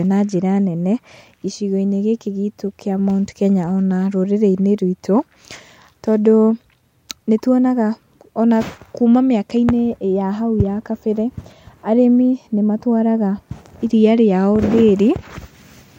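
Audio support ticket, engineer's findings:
Nothing stood out on listening to the speech clip; no issue to log.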